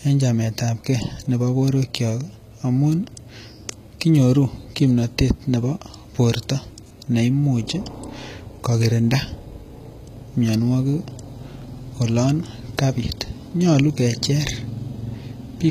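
HE-AAC compression runs through the whole speech clip, with plainly audible damage. The treble is likely rebuilt by band replication from copied lower bands rather than coded, which fits a bitrate near 20 kbps, so s sounds turn gritty and metallic, and nothing remains above 14.9 kHz.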